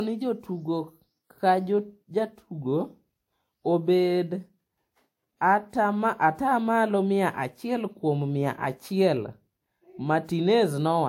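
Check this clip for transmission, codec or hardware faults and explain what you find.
The clip shows one codec fault lasting its entire length. Transcoding between lossy codecs, likely a WMA encode then Vorbis, stacks both codecs' artefacts on the speech, with nothing above 16.6 kHz.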